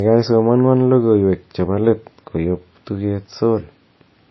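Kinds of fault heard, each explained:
Transcoding between lossy codecs: Nothing comes through above about 5.8 kHz, and swirly low-rate smearing sits under a cleaner, finer grain. That points to a likely chain of a very low-bitrate MP3 re-encoded to a higher-rate WMA, which kept the earlier damage and added its own.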